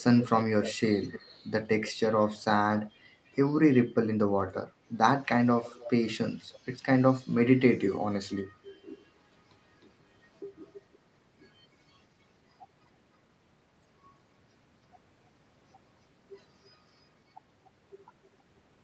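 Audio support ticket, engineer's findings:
Faint delayed repeat of the speech, in short scraps, trailing the original by about 300 ms, creeping to about 320 ms by the end. At 0–0.27, 0.63–1.35, 1.66–1.92, 2.72–2.91, 5.63–5.9, 6.42–6.76, 10.73–10.98 and 16.65–16.69 s. Level about 15 to 40 dB under the speech, loudest early. Echo leak, likely from a loudspeaker on the far end whose echo canceller let residual pickup through and sent it back.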